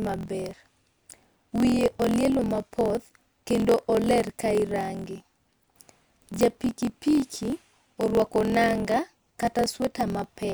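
Throughout the speech, a block size mismatch (truncated) discards the tail of each block: one stage writes longer blocks than the next reads. A buzz at 43.1 Hz, which fits 1024-sample reads, runs under everything, and delivery is 1.12 times fast with its timbre kept.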